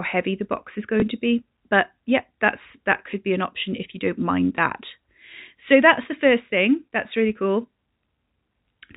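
Speech with two brief blips, one from 1.00 to 1.02 s and another at 4.56 s, each like a tiny hiccup. Both come from packet loss with the last packet repeated: a 20 ms gap, fitting one lost packet, was filled by replaying the previous packet, which probably did not line up with the pitch. The audio is carried over G.711 telephone coding.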